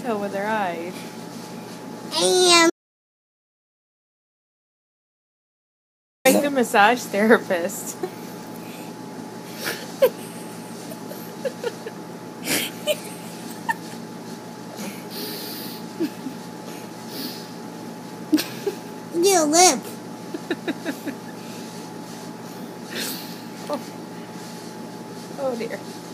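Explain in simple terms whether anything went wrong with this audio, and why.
Audio dropout to silence, from 2.7 s to 6.25 s. The sound cuts off abruptly, and for about 3.6 seconds there is dead, total silence, with not even the faint background hiss a quiet room leaves. It then returns mid-flow. The likely cause is that the input was briefly lost, perhaps through a loose connection, a failed link or an accidental mute, while the recorder kept writing pure silence. Whatever happened during that gap was never captured.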